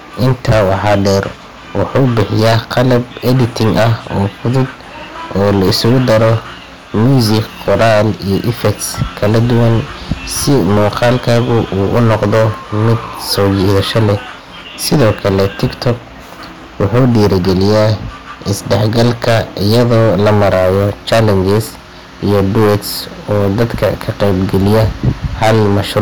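Speech with hard clipping throughout: the signal is driven about 19 dB past what the stage can pass, so roughly a tenth of the samples are cut flat. The squared-off peaks add high harmonics, giving a harsh fuzz on every loud syllable.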